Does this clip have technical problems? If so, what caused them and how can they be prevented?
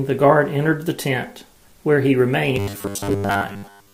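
Yes. From 2.56 s to 3.93 s, incoming audio likely stalled and a 10 ms buffer repeated for most of that span, causing robotic sound from repeated short buffers: a rigid 100 Hz metallic buzz. A larger jitter buffer and a steadier delivery path would keep fresh audio arriving on time.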